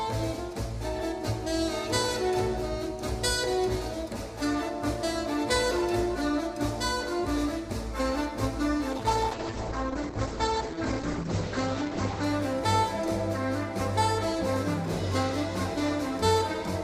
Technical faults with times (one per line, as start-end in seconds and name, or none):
8.92-12.29 call bitrate drop